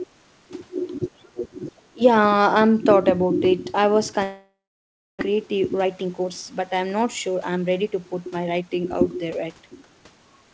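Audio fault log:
0.99–2.01 s, speech suppressed in double talk: the speech sinks by about 30 dB for roughly a second, likely because the echo canceller mistook the talker for loudspeaker echo while both sides spoke. The waveform shrinks sharply, and the spectrogram shows faded harmonics and patchy gaps.
4.24–5.23 s, long network dropout: the sound carries on as a fading buzz, then goes silent for about 0.63 s before resuming, with about 0.6 s never played. This is likely a stretch of lost packets the receiver had to conceal. The waveform shows a decaying smear into a flat line, and the spectrogram shows blurred energy below the 8 kHz ceiling of the call band, then nothing.
5.31–8.69 s, jitter buffer speed-up: after the dropout, the receiver trims short pitch-period chunks repeatedly, cutting around 0.4 s to shed the built-up delay. The sound plays at 110% speed at unchanged pitch and feels hurried. 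Syllables look compressed in time, with small discontinuities at each splice.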